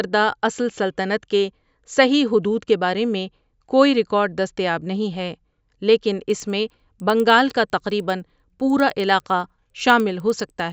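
Speech, where from 6.3 s to the end, right after "ہے لیکن", the resampler restarted on every block, converting each 100 ms block in isolation, likely from 16 kHz to 48 kHz. Each block edge gets a small error, heard as regular ticks at 10 Hz under the voice.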